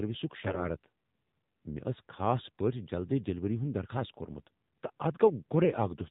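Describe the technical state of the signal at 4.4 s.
At 4.4 s the speech has passed through the AMR narrowband mobile codec, which affects the whole clip. The signal was squeezed to 8 kHz sampling and rebuilt from a vocal-tract model fed by a few pulses per 5 ms subframe, so nothing above 4 kHz survives. The damage is plainly audible. The voice sounds muffled and phone-like with a buzzy, synthetic edge, which fits a low mode around 7.4 kbps.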